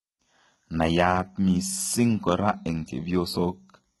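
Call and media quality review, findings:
Whole clip: treble synthetic, sibilants gritty, metallic, heavily damaged, nothing above 11.8 kHz. Likely HE-AAC compression, fitting roughly 16 kbps: upper band copied up from lower bands, not lowpassed, so harmonics mismatch above crossover.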